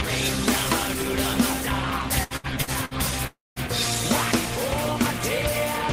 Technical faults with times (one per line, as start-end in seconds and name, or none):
2.23-2.94 repeated packet loss (robotic sound)
3.27-3.59 long network dropout